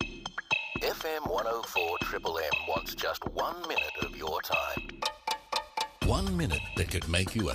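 Nothing goes wrong anywhere in this clip, so there's no fault to point to at any moment.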